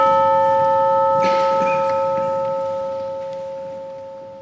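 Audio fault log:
Nothing wrong to log here: the sound comes through with no faults to point at.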